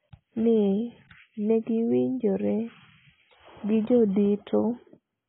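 Throughout, the speech is dull and band-limited, with nothing above 3.8 kHz and a warbling, smeared texture, likely heavy AAC compression at a low bitrate around 16 kbps.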